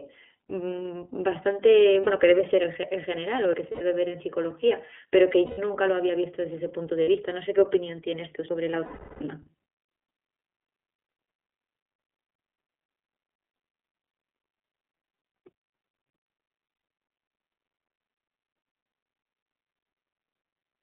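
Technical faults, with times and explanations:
Throughout, iLBC codec: the sound is squeezed into a 250 Hz to 3.4 kHz phone band with a slightly rough, synthetic edge, which fits iLBC's 30 ms frame, 13.33 kbps mode.
2.01 s, 3.71 s, 5.45 s, 7.03 s, 8.84 s and 16.73 s, lost iLBC frames: 60 to 90 ms gaps (120 ms at 5.45, 360 ms at 8.84) where the decoder holds a slightly buzzy or breathy vowel, fading over the longer losses, then recovers straight away.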